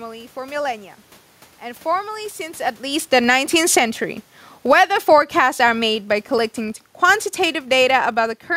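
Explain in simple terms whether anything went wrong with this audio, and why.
Two things went wrong in the processing. The first is a filter restarted on every block. The system handles the sound in short chunks, and a filter in it forgets everything between chunks, starting each one from silence. Every restart leaves a tiny click, and because the chunks arrive 50 times a second, those clicks merge into a steady buzz at 50 Hz running through the whole clip. It gets louder when the speech is louder.

The second is the automatic gain control, which keeps adjusting the volume. It turns the level down from 3.0 to 3.4 s, back up from 3.35 to 4.1 s, down again from 4.56 to 5.4 s, up from 4.79 to 5.9 s, and finally down from 6.08 s almost to the end at 8.47 s. Because it is the volume control moving, the speech and the background rise and sink together, so the clip seems to breathe in and out in level.

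Just before these changes, around 2.5 s, the speaker shifts position and the voice level changes naturally. That, and the room noise, come from the recording itself.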